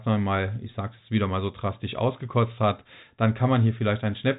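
No technical faults are audible.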